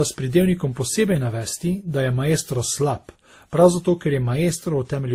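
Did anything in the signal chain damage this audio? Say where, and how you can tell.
Yes. Throughout the speech there is a layered, smeared coding texture: a dulled top end alongside swirly, watery artefacts of more than one character, as if several kinds of compression residue sit on top of each other. At the codec stage, this is likely transcoding between lossy codecs. The artefacts point to a WMA encode near 48 kbit/s, then Vorbis near 54 kbit/s, and finally Opus near 32 kbit/s. Each encoder spent bits reproducing the previous one's errors, and the lowest bandwidth limit in the chain carried through.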